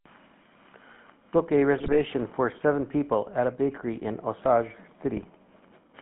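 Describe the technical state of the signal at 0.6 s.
At 0.6 s the speech is running through the GSM full-rate codec, as it is for the whole clip. Its pulse-driven vocal-tract model, squeezed into about 150 Hz to 3.4 kHz, gives a plainly buzzy, gravelly roughness.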